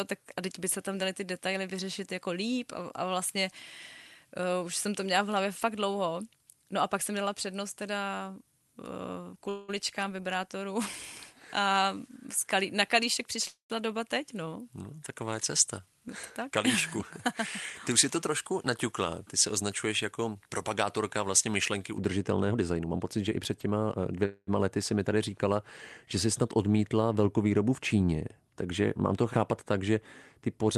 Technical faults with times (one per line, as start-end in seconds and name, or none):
0.00-21.98 pre-emphasis left on
9.49-9.70 call audio freeze
13.47-13.72 call audio freeze
15.79-17.00 jitter buffer speed-up
17.92-20.43 jitter buffer speed-up
22.51-24.25 jitter buffer speed-up
24.25-24.49 call audio freeze